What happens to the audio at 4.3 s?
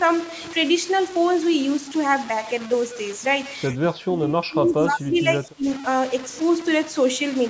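At 4.3 s the speech sits inside a stretch of speech suppressed in double talk, running from 3.75 to 5.66 s. The likely cause is an echo canceller that cannot separate the near talker from loudspeaker echo while both sides speak, so it turns the voice down by as much as roughly 25 dB, leaving it dipped and broken up.

Underneath that, the clip carries low bit depth without dither throughout. The grainy, signal-following distortion, with the error only around 15 dB below the speech, likely comes from truncation to about 5 bits.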